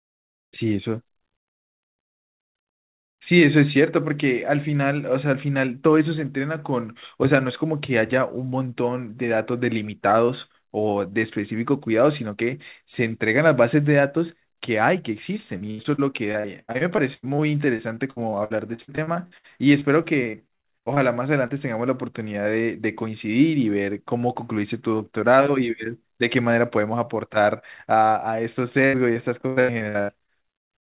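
Repeated packet loss (robotic sound) runs from 15.58 to 17.40 s and again from 17.76 to 20.98 s. Stretches of the stream kept arriving too late or not at all, so the receiver bridged each hole by extending the last sound before moving on, only for the next hole to follow. Roughly a dozen dropouts in the first span and over twenty in the second leave about a quarter of each concealed. The longest holes are 90 ms and 61 ms. The speech turns choppy and robotic, with fragments missing.

Short concealed packet loss follows at 21.46–21.52 s. About 40 ms of audio never reached the decoder in time, and the receiver covered the gap with roughly 33 ms of synthesized continuation, carrying on the preceding pitch or shaped noise before blending back into the real signal. It is heard as a brief smear or wobble, and a short consonant falling there can disappear.

Repeated packet loss (robotic sound) returns from 28.86 to 30.70 s, the heaviest stretch, with about 28% of the span concealed and a longest gap of 95 ms, giving the same broken, robotic texture. 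Throughout, nothing is heard above 4 kHz, which fits the narrowband G.711 call path.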